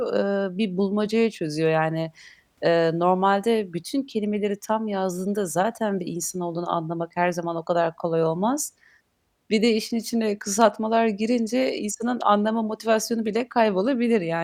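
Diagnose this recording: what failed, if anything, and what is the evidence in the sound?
Nothing failed; no fault is audible in this speech.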